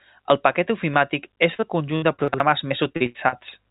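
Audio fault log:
1.54–3.34 s, repeated packet loss (robotic sound): after "el paquet ofimàtic", eleven gaps up to 82 ms were patched by extending prior audio, giving choppy, robotic speech.
2.28–2.40 s, chunks out of order: one 60 ms chunk played a chunk late, so the sequence jumbles briefly at the three hard joins.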